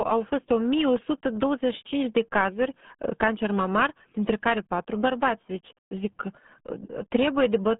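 The speech is run through the RealAudio 14.4 codec for its whole length, and the damage is heavy. The band is confined to roughly 150 Hz to 3.5 kHz with nothing above 3.7 kHz, so sibilants and consonant edges are gone and the speech sounds muffled. The low-rate coding smears the spectral detail into a gargling, watery texture, which fits the 8 kbit/s dial-up-era speech codec RealAudio 1.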